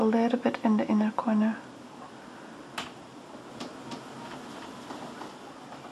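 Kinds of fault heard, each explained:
doubled audio track: between 3.5 and 5.28 s a full-band copy of the sound trails about 300 ms behind at roughly equal level, completely dry, cutting in and out abruptly; likely a slower second capture path or an out-of-step edit.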